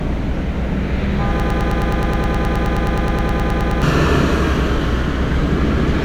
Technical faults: broken-record loop

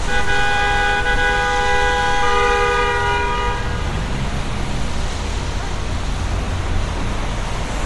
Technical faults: Bluetooth LC3 compression

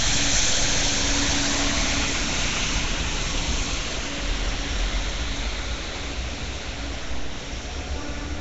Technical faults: Nellymoser compression

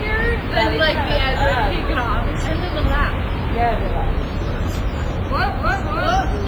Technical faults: WMA compression

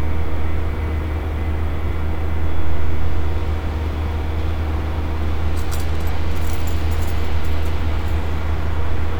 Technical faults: none

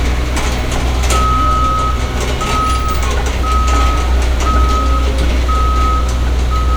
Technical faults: none

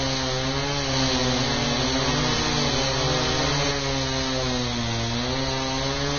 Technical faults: Vorbis compression; doubled audio track

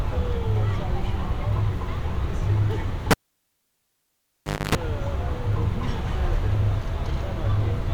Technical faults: cable pulled and plugged in

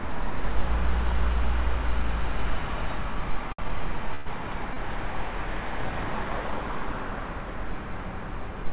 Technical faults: short stall from a late packet; call audio freeze

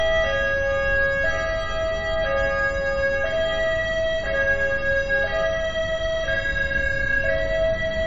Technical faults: MP3 compression

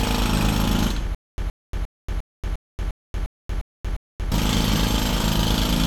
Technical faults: stutter with silent gaps

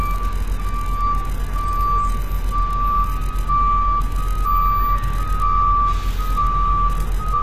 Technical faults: HE-AAC compression

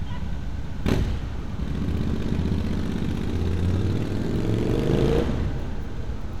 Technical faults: none

